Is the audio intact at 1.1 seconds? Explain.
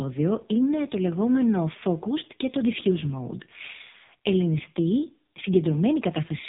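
No. At 1.1 seconds, as through the whole clip, the speech sounds buzzy, synthetic and muffled, with nothing above 3.8 kHz. This is the AMR narrowband mobile codec under heavy damage, its vocal-tract model rebuilding the voice from few pulses at a bitrate that sounds near 5 kbps.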